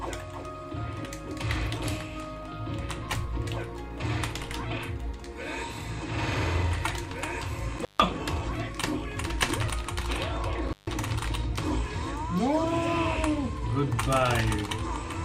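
At 7.78 s and again at 10.68 s the audio drops out briefly. Both are intermittent contact, a loose cable or plug opening for a moment. Each gap lasts about 145 ms, framed by crackle where the connection breaks and remakes, with faint hiss inside.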